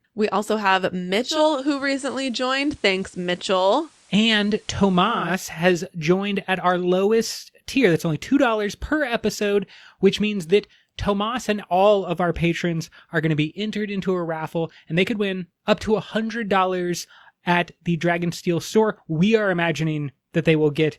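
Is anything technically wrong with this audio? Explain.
Yes. From 1.20 s to 5.39 s, between "also have" and "has joined at our", the speech picks up a soft hiss, roughly 35 dB down, with no jump in level. This is digital radio blending to analogue: the receiver lost the digital stream and cross-faded over 367 ms to the station's FM broadcast, whose noise floor is what you hear, then faded back.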